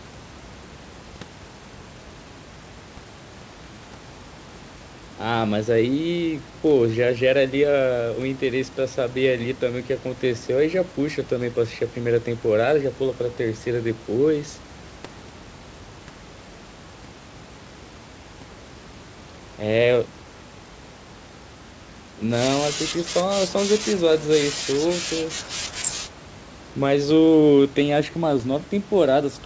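Nothing goes wrong anywhere in this speech recording: the sound tops out at 8 kHz, which fits a wideband call codec, and the room noise sits about 28 dB below the talking, both simply part of how the call was captured and sent.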